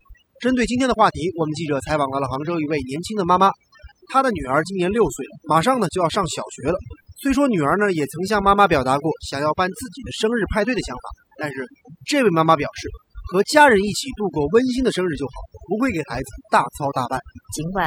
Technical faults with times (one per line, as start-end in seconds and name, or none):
0.00-17.87 overdone noise removal